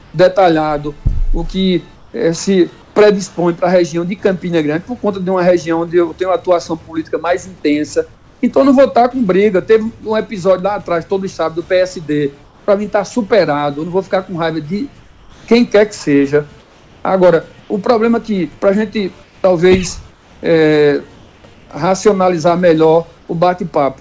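Comfort noise in place of the background appears at 0.02–0.14, 1.96–2.96, 8.14–8.42, 12.44–12.68, 15.00–15.48, 16.60–17.70, 19.24–21.70 and 23.18–23.28 s. In each pause the real background gives way to flat, featureless hiss, up to about 4 dB quieter. This is likely discontinuous transmission, with synthetic noise filling in. The sound has nothing above 8 kHz, which fits a G.722 call path.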